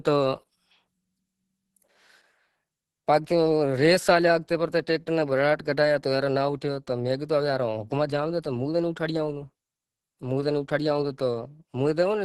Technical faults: Opus compression

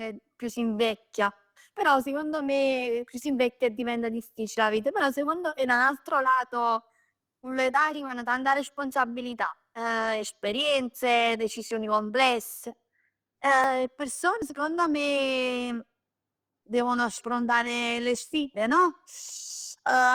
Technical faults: dropped buffer (overrun)

